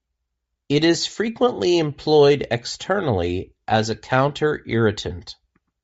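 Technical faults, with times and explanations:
Throughout, Bluetooth LC3 compression: the speech has a plainly audible breathy, grainy edge, with upper frequencies replaced by noise fill. This is likely LC3 coding at a low bitrate, around 32 kbps with 10 ms frames, where the encoder discards upper spectrum and fills it with noise.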